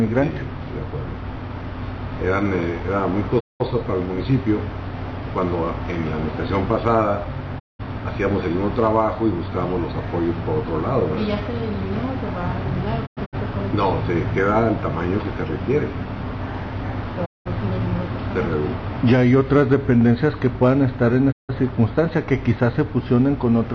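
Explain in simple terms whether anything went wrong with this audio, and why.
Digital broadcast dropout: the receiver lost signal frames and muted, so sound fades out for about 0.2 s at 3.39, 7.58, 13.05 (several short holes), 17.24 and 21.31 s.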